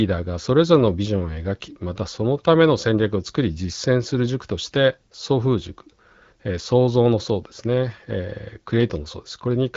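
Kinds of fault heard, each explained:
No faults heard; the speech carries only the light coding character expected of the AMR wideband (HD Voice) codec at 12.65 kbit/s, with nothing beyond it.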